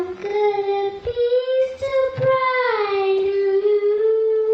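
At 3.18 s a call bitrate drop sets in and lasts the final 1.36 s of the clip, to 4.53 s. The encoder suddenly has far fewer bits to spend, so the sound turns coarser, rough and watery, with the top end dulled, which fits a fall from about 32 kbps to about 14 kbps. On a spectrogram the upper frequencies thin out and end at a lower ceiling, with blotchy, smeared texture replacing fine detail.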